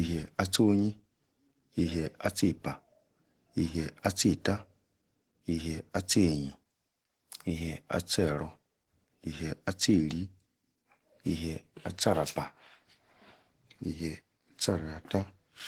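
Throughout the speech, Opus voice compression is plainly audible. Its hybrid coder quantises the excitation coarsely, which leaves the speech hoarse and faintly robotic and fits a bitrate near 16 kbps. A spectrogram shows content up to about 20.3 kHz, with coarse blocky texture above 8 kHz at 20 ms steps.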